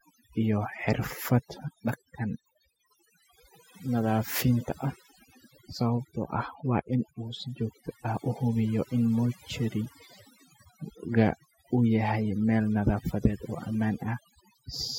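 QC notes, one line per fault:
Throughout, overdone noise removal: a noise reduction stage set far too strong pulls individual frequency bands down whenever they sit near its noise estimate, taking quiet parts of the speech with them, so the background drops and breaks up into twinkling specks.
6.09 to 7.04 s, GSM signalling bursts: a nearby 2G phone sends short groups of radio bursts while signalling, and the audio circuit rectifies them, producing a galloping dit-dit-dit of brief buzzes at the 217 Hz burst rate, roughly 25 dB below the speech.
7.04 to 8.21 s, GSM phone buzz: the phone moves into a call and transmits continuously at 217 bursts per second, which the circuit rectifies into a steady, hard, raspy 217 Hz buzz rich in harmonics and unrelated to the speech, about 34 dB below it.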